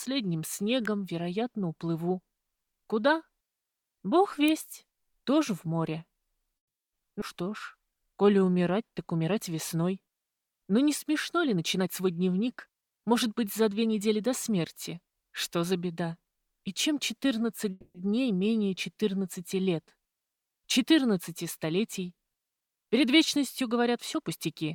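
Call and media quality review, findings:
Electrical switching spike at 0.85 s and 4.48 s. Sharp snaps on top of the audio. Likely a nearby switch or discharge arcing into the audio line.

Call audio freeze at 6.57–6.93 s. Audio stops for 350 ms, fully silent, then resumes where it left off. Likely jitter buffer underrun from held-up packets. Nothing lost, delay grows 350 ms.

Call audio freeze at 17.71–17.96 s. 240 ms of held, fading continuation, briefly silent, then resumes. Same likely receive-side underrun. Delay grows 240 ms.

Skip ahead at 7.20 s. Playback jumps forward almost seamlessly. Roughly a tenth of a second missing. Audio dropped in transit or by an overflowing jitter buffer.

Jitter buffer slow-down at 7.44–8.65 s. Audio runs at 91% speed, same pitch, drawn out. Receiver repeats pitch periods, adding 117 ms to rebuild reserve.

Jitter buffer speed-up at 11.56–15.72 s (108%, about 400 ms removed) and 22.60–24.72 s (106%, about 150 ms removed). 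Hurried audio at unchanged pitch. Receiver trims pitch periods to shrink excess buffering.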